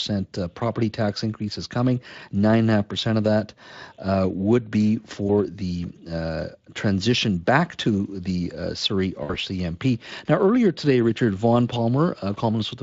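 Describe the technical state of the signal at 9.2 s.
VoIP packet loss concealed by the speech codec, 9.23 to 9.34 s: about 60 ms of packets went missing, and the Speex decoder extrapolated its last pitch and filter, leaving a fading buzzy tone or coloured noise.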